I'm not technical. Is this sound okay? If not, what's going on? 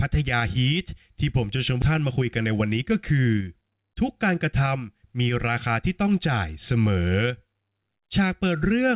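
No, there are two problems close together near the start.

At 1.82 to 1.84 s there's a skip ahead. Roughly 0.4 s of speech simply never gets played: the call's jitter buffer, which holds incoming audio so it plays back smoothly, either lost that stretch or threw it away when too much had piled up. Playback jumps straight to later audio with no pause or filler, so you hear an abrupt splice.

From 1.92 to 4.36 s you get a jitter buffer speed-up. The buffer was holding more audio than it wanted, so it trimmed many tiny slivers, each only a pitch cycle or so long, to catch up. That shaves off around a fifth of a second in total. The speech plays about 8% faster but keeps the same pitch, so it sounds a little rushed rather than squeaky.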